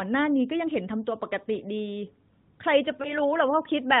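Narrowband mobile speech, band-limited at 4 kHz. At 3.02 s a lost AMR speech frame causes a brief dip or warble, recovering by 3.18 s. It sounds like one missing 20 ms frame, concealed by the decoder replaying the previous frame's settings at reduced level.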